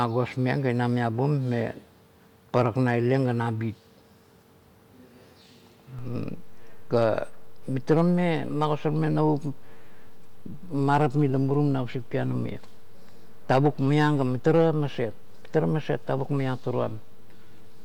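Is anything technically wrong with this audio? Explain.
Yes. At 5.99 s a single low thump cuts through the speech, and the speech continues unchanged afterwards. This is a DC step. The waveform's zero line jumps abruptly by about -34 dBFS and stays offset through to the end of the clip. The sudden shift of the baseline is what produces the thump. An input with a standing offset being switched in, or a converter recalibrating mid-recording, would cause exactly this jump.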